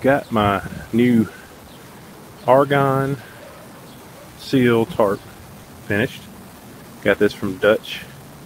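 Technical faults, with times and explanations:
Throughout: stuck bit. Distortion rides on all the audio and pauses fill with noise, likely from one data bit stuck at a fixed value.
0.67–0.71 s, 1.47–1.51 s, 5.63–5.69 s, 6.59–6.63 s: short concealed packet loss. Gaps of 20 ms, and 40 ms at 5.63 s, were filled by extending the preceding sound, heard as brief smears.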